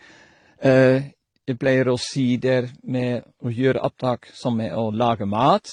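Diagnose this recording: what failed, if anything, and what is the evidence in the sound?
Codec stage, likely transcoding between lossy codecs. Nothing above 10.5 kHz throughout. Layered artefacts fit AAC at 32 kbit/s re-encoded as HE-AAC.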